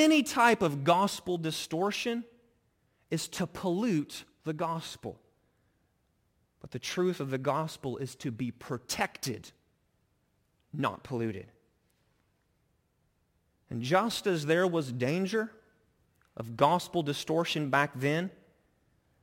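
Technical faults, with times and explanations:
Throughout, crude rate conversion: samples simply dropped, fitting 48 kHz to 44.1 kHz, leaving a gritty inharmonic fizz on the speech about 25 dB down.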